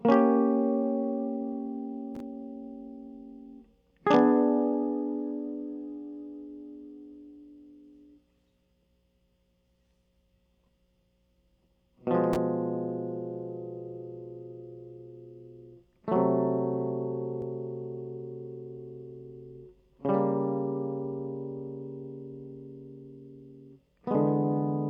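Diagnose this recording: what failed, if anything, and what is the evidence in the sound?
Nothing failed at any stage of the chain: the music runs without a break, glitch or level anomaly, so there is no evidence of a fault to report.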